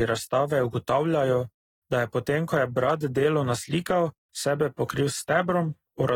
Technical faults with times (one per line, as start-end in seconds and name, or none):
0.00-6.15 AAC compression